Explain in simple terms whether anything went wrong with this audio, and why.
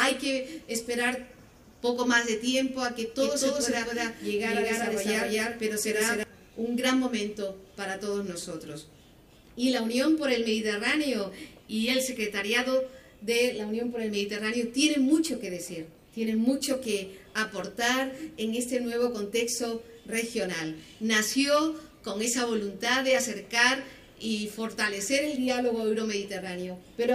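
From 3.19 to 6.23 seconds there is a doubled audio track. The same sound plays twice, with a second copy about a fifth of a second behind and just as loud. It likely comes from the sound being recorded again through a slower path.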